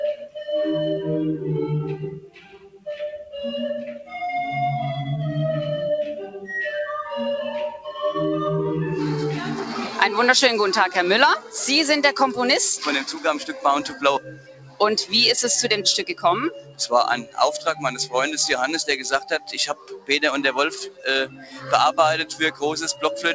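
A speech-tuned noise suppressor has been left running on this non-speech audio, so held parts and tails keep getting pulled down while attacks get through. The level pumps and thins by roughly 10 dB across the whole clip. On top of that, it clamps hard on specific stretches it mistakes for noise: 2.2–2.87 s (about 17 dB down), 14.24–14.81 s (about 16 dB), 16.5–16.84 s, 17.22–17.38 s, 19.72–20.09 s, 20.9–21.06 s (each about 13–15 dB), and 21.27–21.68 s (about 10 dB). The sound goes through a call path with nothing above 8 kHz, which fits G.722 at 64 kbps.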